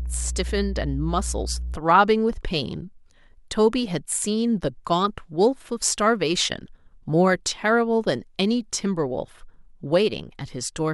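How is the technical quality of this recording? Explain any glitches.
There's one clear glitch, at the very start. From 0 to about 1.76 s there's mains hum: a steady 60 Hz drone, fairly loud against the speech, from a ground loop or nearby transformer leaking power-line current into the signal.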